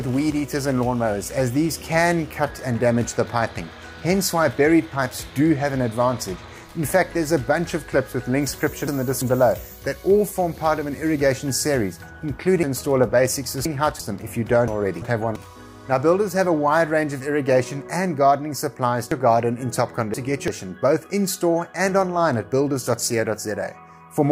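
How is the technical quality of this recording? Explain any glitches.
Technical quality suffers from one recurring fault. Chunks out of order occur at 8.53–9.22 s, 12.63–14.00 s, 14.68–15.36 s and 19.12–20.48 s. A 341 ms block of audio played one or three positions late, so the sound jumps back and forth, with three hard joins each time.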